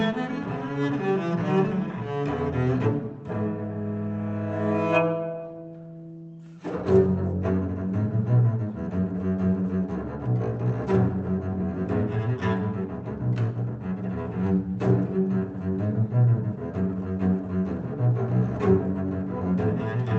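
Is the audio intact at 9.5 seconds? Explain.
Yes, the audio is intact at 9.5 seconds, with no dropout, glitch or other fault at that moment.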